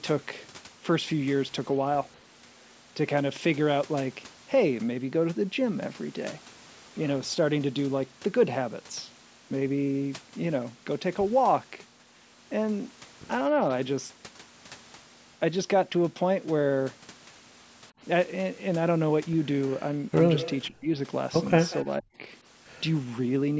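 From 20.38 to 20.53 s there is an echo leak: a faint, delayed copy of the speech trailing the original by 191 ms, sitting about 15 dB below it. The likely cause is a far-end echo canceller that let part of its loudspeaker pickup through and sent it back. Unlike reverberation, which smears continuously, this is a distinct repeat at a fixed lag.

From 20.68 to 20.89 s the speech is suppressed in double talk. The level collapses by roughly 35 dB. This is likely an echo canceller that could not separate the talker from echo while both sides were active, so it turned everything down. Unlike echo, nothing is added here. Speech is removed, leaving holes.

The same pattern repeats. A second echo leak at 21.70 to 21.83 s has the same 191 ms delay and is about 20 dB down. It is followed by suppression from 21.84 to 22.22 s, dipping roughly 40 dB, with about 0.2 s of audio affected in total.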